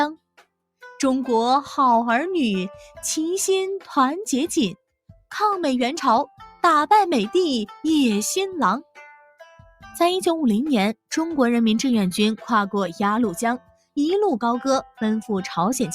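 From 13.61 to 13.96 s the sound abruptly sinks, falling by about 22 dB for roughly a third of a second before recovering. This is sound cut by the noise suppressor, which mistook that stretch for background noise and turned it down hard.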